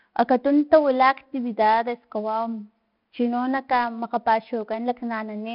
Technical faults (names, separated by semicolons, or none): 4-bit ADPCM compression